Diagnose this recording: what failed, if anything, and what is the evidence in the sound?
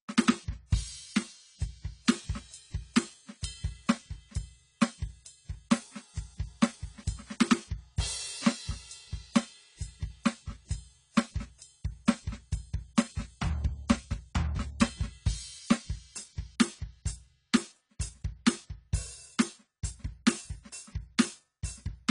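The fault sits at the codec stage. Throughout the music the top end is missing, with nothing above 10.1 kHz, and the coding damage is plainly audible, leaving the sound dull and smeared. That points to likely AAC compression, probably AAC-LC at a low bitrate, around 24 kbps. At that rate the encoder quantises each frame's spectrum coarsely against its hearing model and lowers the cut-off to save bits, removing high-frequency detail across the clip.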